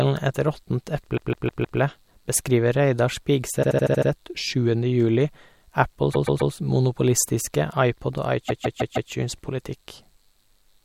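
Speech with repeated frames at four points. From 1.16 to 1.79 s, a 157 ms slice plays four extra times. From 3.62 to 4.09 s, a 78 ms slice plays six extra times. From 6.13 to 6.52 s, a 131 ms slice plays three extra times. From 8.48 to 9.11 s, a 157 ms slice again plays four extra times. Each is heard as a stutter. A run of compressed frames was decoded again, lengthening the audio by the repeated time.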